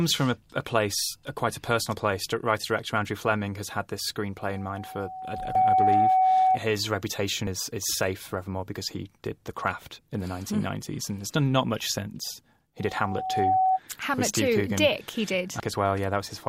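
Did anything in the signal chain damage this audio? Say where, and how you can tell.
Yes. The first problem is acoustic: a loudspeaker feedback squeal, where the microphone was picking up a loudspeaker it was feeding. At 753 Hz the loop gain went above one, so that frequency fed on itself. Just after "has had this", a pure tone starts at 4.37 s and swells for around two seconds to roughly 10 dB above the speech before dying at 6.60 s. It returns at 12.78 s after "done not much since", building faster, in under a second, to roughly 5 dB above the speech, and ends at 13.80 s.

The second problem is damaged data in a compressed stream, which happened at the codec or storage stage. At 5.55 s and again at 15.60 s there are tiny blips, each only a few milliseconds long. The first falls inside the first squeal. Corrupted bytes in the encoded stream left the decoder unable to read those frames correctly. 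It briefly output garbage and then had to find the next valid frame header to regain sync, which is heard as a short blip rather than any analogue click or hum.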